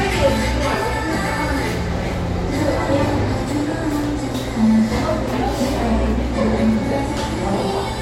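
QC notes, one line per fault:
0.74–0.76 s, loud pop: a single sharp pop stands about 10 dB above the surrounding sound, which carries on beneath it. This is likely a brief voltage pulse from a plug, switch, static or driver glitch, shaped by the downstream circuitry into a short, hard transient.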